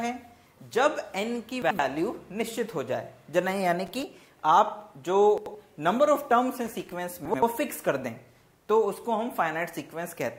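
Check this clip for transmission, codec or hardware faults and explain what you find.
Two kinds of fault occur, chunks out of order and loose connector crackle.

From 1.62 to 1.79 s, 5.38 to 5.55 s and 7.25 to 7.42 s, chunks out of order occur: an 85 ms chunk arrives one slot late, so two chunks swap places. Each spot sounds briefly jumbled.

From 3.86 to 4.03 s and 6.65 to 6.92 s, loose connector crackle occurs: a failing contact rapidly breaks and remakes the signal path, producing irregular bursts of scratchy crackle.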